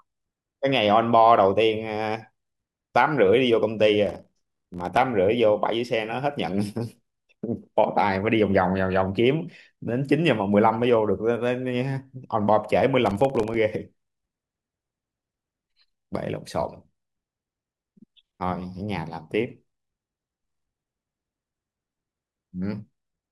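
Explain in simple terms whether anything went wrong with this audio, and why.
Two stretches of processor overload crackle, from 4.06 to 4.97 s and from 13.06 to 13.56 s. The computer couldn't keep up, so dozens of tiny chunks of the speech, each around a millisecond and a half, dropped out as silence, which gives that gritty, torn sound.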